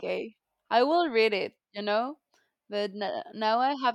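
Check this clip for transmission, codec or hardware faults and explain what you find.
No transmission, codec or hardware faults turned up here.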